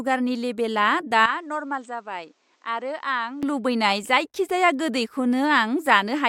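From 1.26 s to 3.43 s the speech turns duller and quieter, dropping by roughly 10 dB, with nothing above 8.5 kHz and a faint new noise floor. There is no gap at either change. The likely cause is an input switched to a poorer device, then switched back.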